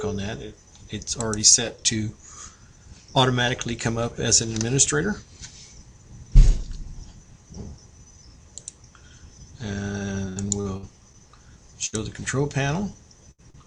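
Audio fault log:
10.15–11.17 s: repeated packet loss (robotic sound). Six gaps across this second, the longest 75 ms, with about 206 ms patched by extending the previous sound and 120 ms lost outright. Holes follow each other closely, so the audio turns choppy, with fragments missing.
11.86–12.10 s and 13.31–13.41 s: burst of packet loss. Each time roughly 60 ms went missing in a row; the receiver carried the last sound forward for about 61 ms and 71 ms, fading it, giving a held buzz or dying hiss before playback jumps ahead past the gap.
13.50–13.57 s: short stall from a late packet. A packet arrived about 39 ms behind schedule, draining the jitter buffer; the last sound was stretched for those 39 ms until it turned up, then playback resumed in place, so nothing is lost but a sound lingers with a slight buzz or dip.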